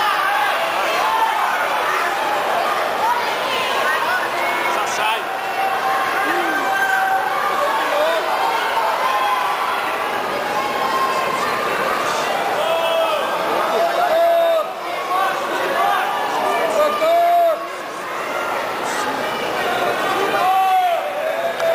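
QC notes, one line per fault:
No faults found on this pass.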